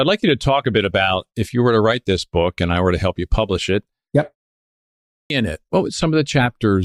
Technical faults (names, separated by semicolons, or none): clipped start after a pause